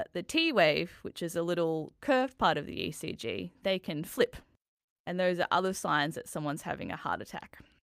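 A recording of speech, with no technical fault to be heard anywhere in it. Nothing calls for a time or a cause.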